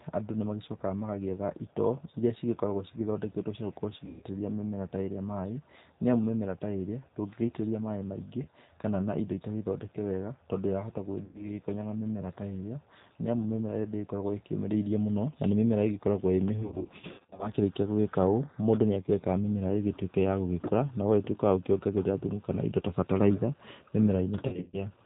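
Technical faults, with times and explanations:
Throughout, G.729 codec: The speech is rebuilt at 8 kbit/s from a vocal tract filter, a pitch predictor and a few pulses per frame. Nothing above 4 kHz survives. The result is intelligible but plainly rough and synthetic.
4.06–4.24, 8.43–8.48, 11.25–11.45 (just after "thondeke wega tondo wahota"), 16.63–17.51 and 24.47–24.86 s, VoIP packet loss concealed by the speech codec: The decoder fills gaps by extending its last pitch and filter and fading the level. The dropouts turn into a buzzy tone or coloured noise that fades. The last two are scattered bursts, and the voice stays weak briefly after each.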